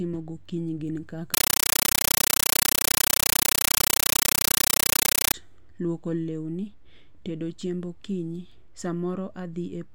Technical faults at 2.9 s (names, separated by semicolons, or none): compressed stream played as audio